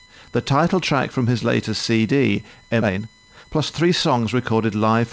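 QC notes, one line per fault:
throughout: USB whine. A steady tone at 1 kHz sits under the audio about 30 dB below the signal, with harmonics reaching up to 20 kHz, where it is strongest. The tone comes from the bus drawing current in 1 ms frames and leaking into the audio through power or ground. Mains hum would sit at 50 or 60 Hz and its multiples, so the 1 kHz spacing points to USB. The whine extends far above the band the 8 kHz-limited call audio occupies, so it was picked up after the call path.
2.82–2.84 s: skip ahead. Playback jumps forward at this point, with about a second of audio missing. The two sides are butted together with no silence and nothing filled in, so the cut is heard as an abrupt splice. A dropout would leave a gap or a concealment smear. Here later audio was already queued when the stretch was discarded, likely by an overfull jitter buffer trimming its delay.
2.87–5.01 s: jitter buffer speed-up. 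Right after the jump, the audio runs at about 119% of normal speed, and roughly 0.4 s is trimmed away in many short pitch-period cuts. The pitch stays where it was while the pace turns hurried. That unchanged pitch is what separates this from a resampling or playback-rate error, which would raise the pitch too. The receiver was still working off excess buffered delay after the skip.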